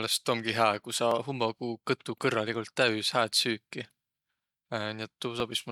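From 1.11 s to 5.40 s the speech carries a click roughly every 1.43 s, about four in all, each landing at that steady spacing regardless of what is being said. That regularity points to clock drift buffer slips: the likely cause is two devices running on separate clocks, off by something like 700 ppm, so the buffer between them drifts until a short block of a few dozen samples is dropped or repeated.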